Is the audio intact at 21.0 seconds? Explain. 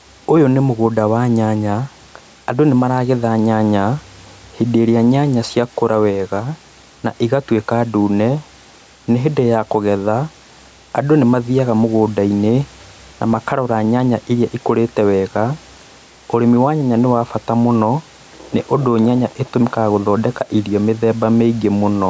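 No. At 21.0 seconds the speech still carries the gain pumping heard throughout the clip, likely from input gain set far too high and a fast limiter pulling it down on each loud syllable. The gain swings by around 5 dB, pulled down under the louder speech, so the level seems to breathe. Unlike a noise gate, the sound never cuts to silence; the gain rises and falls with the speech.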